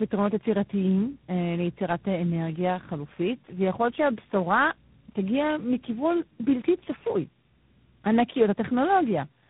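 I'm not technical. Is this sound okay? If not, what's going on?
No, it isn't quite right. The speech has a problem called tandem speech coding, and you can hear it from start to finish. The call seems to have passed through about three different phone systems, each squeezing and unpacking the voice in its own way before handing it on. Every step worked on an already worn-down copy, so the speech sounds rough, muffled and warbly, with nothing above about 3.8 kHz.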